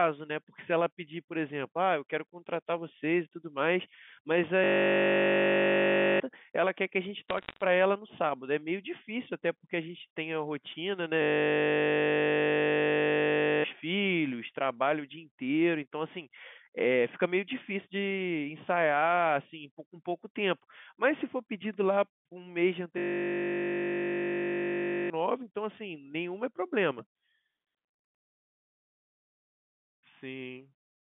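At 4.64 to 6.2 s, a system hang loop replays one 20 ms slice of the speech over and over, giving a steady 50 Hz buzz. It happens again at 11.22 to 13.64 s and 22.98 to 25.1 s, each time swallowing a second or two of audio. Between 7.29 and 7.62 s, bit errors on a digital phone line flip individual samples in the G.711 stream, producing a brief burst of sharp ticks and crackle over the speech.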